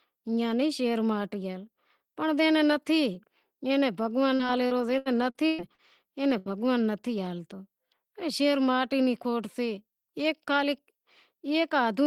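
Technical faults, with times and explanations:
4.35–5.81 s, repeated packet loss (robotic sound): six gaps, the longest 120 ms, hide about 360 ms of speech, each patched by extending the previous sound. The spectrogram shows frozen, smeared harmonic patches covering about 23% of the stretch, and the waveform looks choppy.
6.38–6.52 s, burst of packet loss: about 80 ms of speech is gone, replaced by a continuation of the last sound that is turned down as it runs. The waveform shows a steadily decaying segment, and the spectrogram shows flat, fading bands before speech resumes further on.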